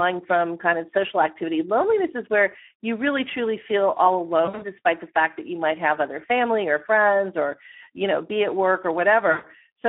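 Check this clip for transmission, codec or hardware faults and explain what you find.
Two faults are audible in this speech: constant codec damage and two short dropouts.

Speex codec, throughout: the voice sounds hoarse and grainy within a narrow 250 Hz to 3.4 kHz band, which fits low-rate Speex near 11 kbps starving the excitation of bits.

VoIP packet loss concealed by the speech codec, at 4.45 to 4.63 s (after "really truly feel all", before "despite the fact that") and 9.31 to 9.47 s (after "know be at work"): the voice smears into a buzzy tone or coloured noise that fades as the decoder extrapolates its last pitch and filter over lost packets. The first gap is broken up rather than one solid hole.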